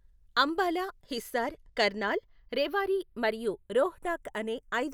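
Channels drifting apart throughout: slightly mismatched clocks let the offset creep to a fraction of a millisecond, so mono slowly flanges, unlike a static comb.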